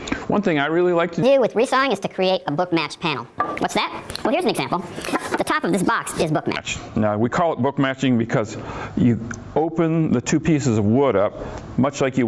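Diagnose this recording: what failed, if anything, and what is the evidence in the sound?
From 1.23 s to 6.56 s the sound runs fast and sharp: speed and pitch both rise by a factor of 1.5, about 7 semitones, then snap back. This is a wrong sample rate fault at the playback or converter clocking stage. The samples were clocked out faster than they were captured, with no resampling, which fits 16 kHz material played at 24 kHz. On a spectrogram every harmonic and band jumps up by half over that span, and events compress horizontally. The waveform looks squeezed in time.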